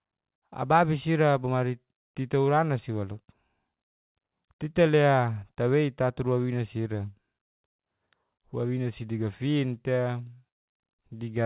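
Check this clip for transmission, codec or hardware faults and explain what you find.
Nothing stood out on listening to this speech, which comes through a telephone-band call path that, as expected for G.711 mu-law, carries no sound above 4 kHz.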